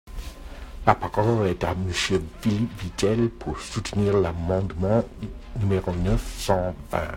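Across the whole speech clip there is periodic clock jitter: interference is modulating the converter's sampling clock at a steady rate, around 700 Hz. Each spectral component picks up sidebands spaced roughly that far above and below it, worse on higher frequencies, giving the speech a rough, metallic edge that drops out in the pauses.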